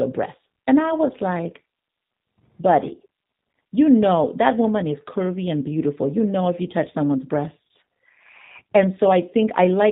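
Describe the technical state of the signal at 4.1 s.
At 4.1 s the speech sounds thin, slightly rough and synthetic. Nothing is heard above 4 kHz, and the voice has a plainly audible, reconstructed character. This is G.729 codec damage, present for the whole clip rather than only at this moment. Instead of carrying the waveform, the codec resynthesises each 10 ms frame from a vocal tract filter, a pitch predictor and a few pulses, which fits a low rate of about 8 kbit/s.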